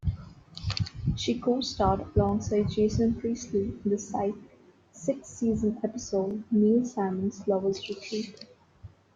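The speech was handled in 4.0-second chunks that overlap, so each chunk begins 20 ms before the previous one ends. That short slice plays twice at every join, producing a brief click-like stutter from 2.29 to 2.31 s and again from 6.31 to 6.33 s.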